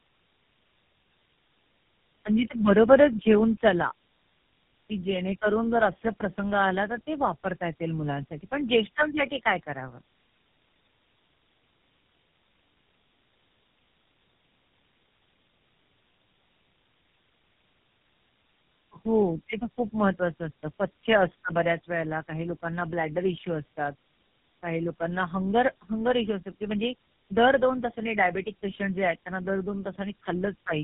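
Throughout this speech recording the sound is rough, muffled and warbly, with nothing above 3.6 kHz, which is the mark of tandem speech coding. The call appears to have passed through three speech codecs in a row, likely AMR-NB twice and then GSM full rate, each bridged by G.711 A-law. Every coder works on the previous one's damage, so the roughness builds up beyond what any single low-bitrate codec would give.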